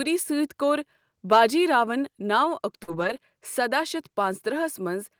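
At 2.83 s a brief smear wobbles the speech: short concealed packet loss, where about 40 ms never arrived and the receiver extended the preceding sound across the hole. From 2.88 to 3.18 s, just before "سداہ شتھ", the speech turns rough and noisy: a lost packet rebuilt from error correction, with the decoder playing low-bitrate backup copies carried in the following packets.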